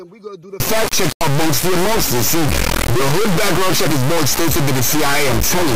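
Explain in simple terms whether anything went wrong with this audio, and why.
From about 0.60 s to the end, the sound turns into a harsh, extremely loud buzzing square wave that falls silent in very quiet moments. That's integer read as float: whole-number samples decoded as decimal numbers. Unlike ordinary clipping, the original sound's shape disappears entirely.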